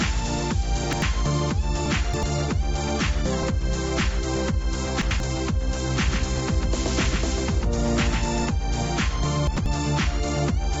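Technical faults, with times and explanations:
0.84–1.02 s, 1.86–2.23 s, 5.02–5.20 s and 9.47–9.66 s: chunks out of order. At each of these points a block of about 93 ms plays after material that should have come after it. At 1.86 s the late block has jumped three blocks back, and at the other three points it has jumped one. Nothing is missing, but the sequence stumbles at hard joins at the block edges. That separates this from dropouts, which leave gaps, and from stutter, which repeats audio. The missing content above 8 kHz comes from the G.722 call path and is not part of this fault.
6.08–8.46 s: doubled audio track. A second full-band copy of the sound runs about 150 ms behind the original and a few dB quieter. It has no decay tail and no room colouring, and it cuts in and out abruptly at the edges of the range. An echo or reverb would fade and take on the sound of a space, which this does not. 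The likely cause is the same signal being captured again through a slower path and mixed back in.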